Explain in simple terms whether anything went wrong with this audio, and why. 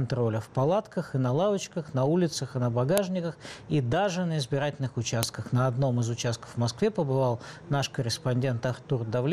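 Sharp snaps at 2.98 s and 5.23 s are file header played as audio: leftover file data at each join, clicking regardless of the sound.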